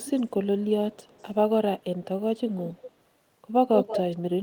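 Right from the start, 0 to 0.66 s, there's a faint delayed copy of the speech trailing about 200 ms behind, and it returns even quieter from 0.92 to 1.31 s. That's echo leak, likely a far-end speakerphone whose echo canceller let some of its mic pickup back down the line. From 2.76 to 2.91 s a brief scrap arrives with a 170 ms lag, and from 3.76 to 4.2 s the echo comes back about as loud as the speech itself.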